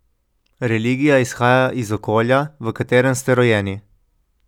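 No technical faults are audible.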